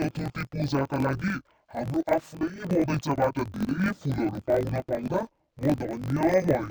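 Speech runs throughout with interleaved audio read as planar: each block of about 21.3 ms, which fits a 1024-sample block, is split in halves, so the sound drops an octave, doubled and choppy at 46.9 Hz.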